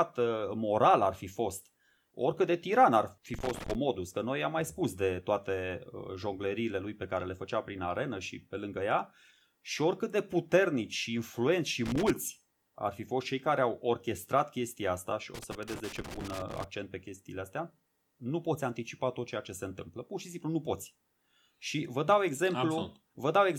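A worn or dirty contact somewhere in the signal path is intermittently making and breaking, so this speech is hit by loose connector crackle three times: from 3.34 to 3.75 s, from 11.86 to 12.10 s, and for the longest stretch from 15.35 to 16.64 s. Each time the connection flickers, the signal is chopped into fragments, producing an irregular burst of scratchy crackle layered over and breaking up the audio.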